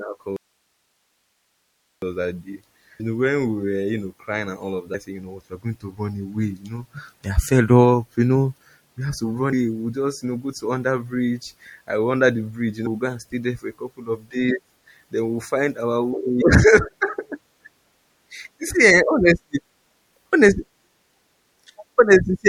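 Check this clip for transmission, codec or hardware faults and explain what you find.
Three faults are audible in this speech recording: codec damage throughout, one early dropout, and three short skips.

Throughout, the speech sounds watery and swirly, with chirpy sibilants. This is likely MP3 compression at a low bitrate, around 64 kbps, switching weak frequency lines on and off.

From 0.36 to 2.02 s the signal cuts abruptly to hiss alone, about 50 dB below normal level, for roughly 1.7 s. This is likely an audio dropout to a faint residue, where the source was lost while the path stayed live.

At 2.99 s, 4.93 s and 16.41 s the audio lurches forward with a brief smeared blip rather than a click. These are compressed frames skipped. Each jump fits a whole number of 24 ms frames being discarded, dropping about 300 ms, 500 ms and 200 ms of audio respectively.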